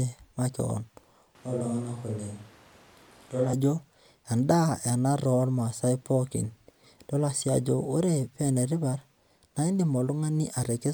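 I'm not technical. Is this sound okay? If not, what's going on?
No. From 1.35 to 3.53 s the speech abruptly turns roomy and hollow, thinner in the low end, a bit quieter, with more background noise, then returns. That is a switch to a distant microphone: the close mic likely dropped out, leaving a farther one.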